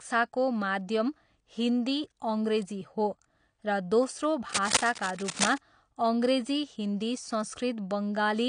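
Cable scratch noise appears from 4.49 to 5.58 s in this speech recording: dense, uneven bursts of scratching roughly as loud as the speech itself, most likely from a worn cable or connector being moved so its contact resistance jumped rapidly. AAC compression runs throughout, with nothing above 9.9 kHz, a dull, smeared quality and plainly audible warbling and fizz on sibilants. The cause is likely a low-bitrate AAC-LC encode, consistent with about 32 kbps, where the coarsely quantised spectrum lowers the cut-off and leaves gaps.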